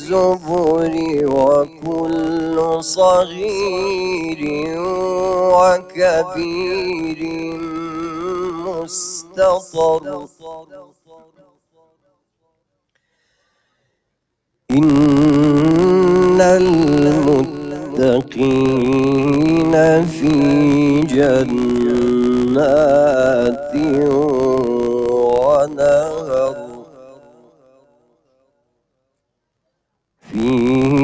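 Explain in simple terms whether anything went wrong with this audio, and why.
Noise suppressor applied to music or sounds, throughout the clip: a cleanup tool built for talking was left switched on. It mistakes steady, held sound and lingering echoes for background noise and keeps turning them down, so the audio swells and sinks and sounds thin.

Sound cut by the noise suppressor, at 0.0–0.52 s, 0.88–1.13 s, 1.64–2.86 s, 3.24–5.01 s, 5.78–11.86 s and 25.65–28.15 s: in these stretches the suppressor pushed the sound down hardest. Sustained parts fade or get chopped short, while sudden hits still come through.

Filter restarted on every block, throughout: a filter forgets where it was after each small chunk of audio and starts over from nothing. Each restart leaves a tiny tick, and together they form a low buzz at 62.5 Hz, which fits 256-sample chunks. The buzz grows louder as the sound gets louder.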